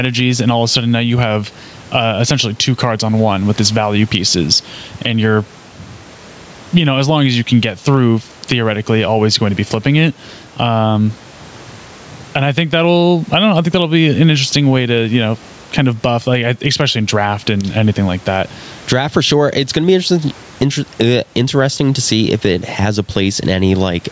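Speech recorded through a call microphone chain, with gain pumping for the full length of the clip. The background noise sits about 36 dB below the speech, and the level swings by roughly 10 dB. Loud and quiet passages are pressed close together, so the delivery sounds squashed. The likely cause is input gain set far too high, with a fast limiter or compressor pulling the level down on every peak and releasing it in the gaps. The call processing's band limit is audible as nothing above 8 kHz.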